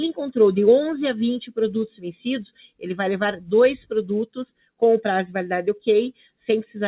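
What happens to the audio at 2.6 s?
Around there the sound gets cut by the noise suppressor: from 2.53 to 2.86 s it mistakes the sound for noise and pulls it down by about 16 dB at the deepest, so it briefly sinks away. That sits on top of a speech-tuned noise suppressor running on music or sounds throughout, which keeps nudging the level by about 5 dB.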